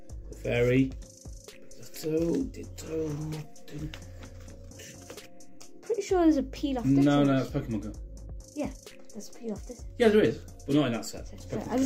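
Nothing goes wrong anywhere in this recording, so there's no technical fault to point to at any moment.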